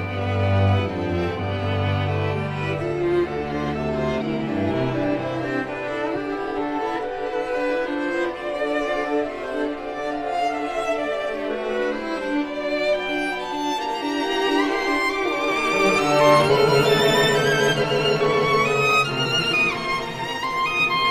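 At about 16.49 s there's a brief glitch from damaged data in the compressed stream: the decoder hit corrupted frame bytes, lost sync and hunted for the next header.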